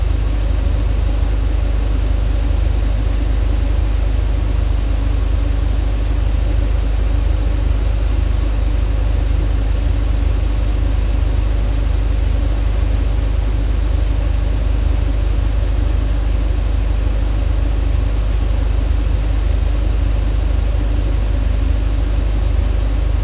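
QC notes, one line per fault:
Throughout: aliasing. The sound was downsampled without a proper low-pass first, so content above about 4 kHz folds back under that edge as unrelated, gritty tones sitting roughly 30 dB below the signal. The spectrum runs hard up to 4 kHz, which fits an 8 kHz rate.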